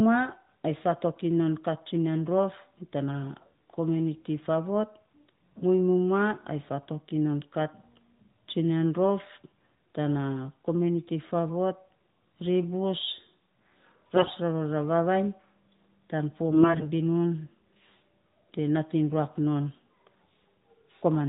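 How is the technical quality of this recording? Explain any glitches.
The recording has two short bursts of AMR bit errors over a narrowband mobile-codec sound, with nothing heard above 4 kHz, which points to AMR-NB, here at 12.2 kbps.

AMR bit errors occur at 14.16–14.32 s, just before "rarora vavainy", and at 16.51–16.90 s, just after "tan fo". Low-priority bits, flipped at roughly 15% and 10% bit error rates, misplace the excitation pulses and skew fine pitch, gain and spectral values. Level and pitch roughly hold, but the sound turns hoarse, scratchy and gargly.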